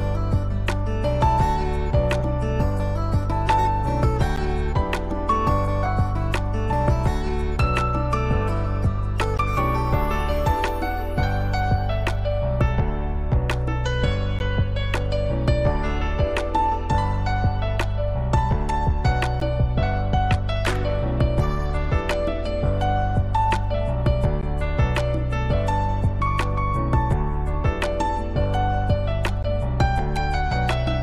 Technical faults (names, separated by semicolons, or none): compressed frames skipped; gap between chunks